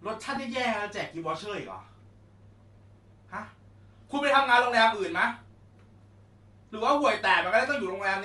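Throughout the speech, the upper spectrum sounds thinned and noise-filled, giving a grainy, breathy edge. This fits a low-rate codec, likely Bluetooth LC3 compression at roughly 48 kbps with 7.5 ms frames. A spectrogram would show patchy, speckled high bands.

At 0.36 s, a lost LE Audio frame leaves a 7.5 ms smeared, noisy blip where the decoder repeated the previous spectrum with scrambled phase. The waveform would show a brief irregular patch, and the spectrogram a short vertical smudge.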